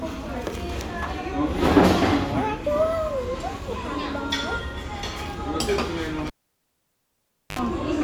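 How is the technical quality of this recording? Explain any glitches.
One clear glitch mars the recording: a cable pulled and plugged in, from 6.27 s to 7.59 s. A live lead was yanked out and reinserted. An opening pop gives way to near silence for 1.27 s, then a 64 ms burst of 50 Hz mains buzz as only the plug tip touched, and a second pop as the sound returns. On a waveform, two sharp spikes bracket a flat gap; a spectrogram shows vertical broadband lines and a brief stack of 50 Hz harmonics.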